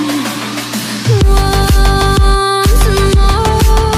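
From start to finish, mains hum sits under the sound: a steady 60 Hz tone at roughly 20 dB below the signal, coupled in from a ground loop or nearby transformer. Unlike rumble from wind or handling, it holds one fixed pitch and level throughout.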